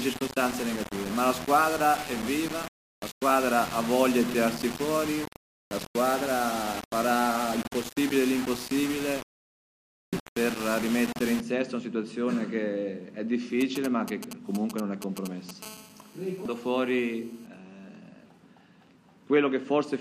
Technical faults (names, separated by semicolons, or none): low bit depth without dither; GSM signalling bursts; GSM phone buzz